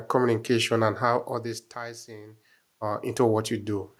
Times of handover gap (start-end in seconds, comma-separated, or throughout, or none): none